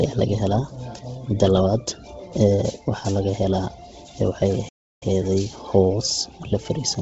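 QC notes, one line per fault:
Throughout: Bluetooth LC3 compression, likely the cause of a heavily damaged sound with a grainy, breathy edge and nothing above 7.7 kHz, which fits a low bitrate around 16 kbps.
4.69–5.02 s: playback stall, the speech halting mid-flow into 334 ms of silence, likely because the player ran out of data, then carrying on.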